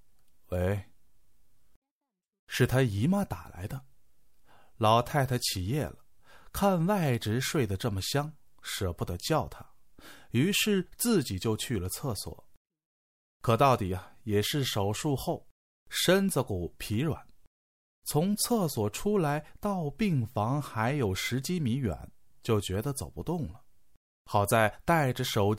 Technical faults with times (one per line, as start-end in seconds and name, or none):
none